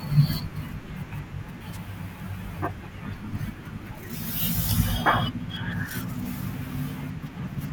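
At 1.72 to 1.78 s, a wireless microphone noise hit: the radio signal fades briefly, letting receiver hiss swell into a short static swish, unlike a digital dropout's silent gap.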